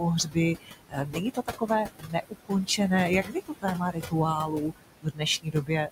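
The background in this speech recording pumps throughout, dropping away in the gaps and swelling back under each phrase. These are noise suppressor artifacts. A suppressor is judging the room noise, which sits only about 10 dB below the speech, and pulling it down by about 20 dB frame by frame. The bands it clears and lets back in shift from moment to moment, which leaves that unsteady residue. Parts of the speech itself also go faint or swallowed at 0.24 to 0.37 s, 0.55 to 2.8 s, 3.23 to 4.14 s, 4.46 to 5.23 s and 5.42 to 5.89 s. In total about 2.3 seconds of sound are turned down, by as much as about 22 dB at the deepest point. This is speech cut by the noise suppressor: quieter consonants and word endings look like the noise floor, so they are attenuated along with it.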